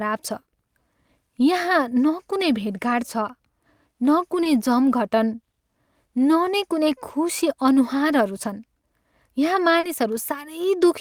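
Short concealed packet loss at 4.43–4.47 s and 9.79–9.85 s: lost 20 and 40 ms packets were filled by extrapolation, giving a brief smear with smoothed, repetitive spectrogram texture.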